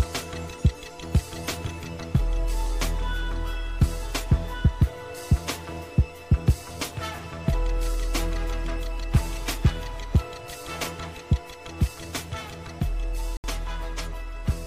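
Near the end, from 13.37 to 13.44 s, the audio cuts out for about 70 ms, a short hole of silence. When the sound returns, it picks up further along, as though it had kept playing through the gap, rather than resuming where it stopped. That pattern is the signature of a Bluetooth dropout, likely caused by a few wireless packets not reaching the headphones in time, so the receiver had nothing to play until good data arrived.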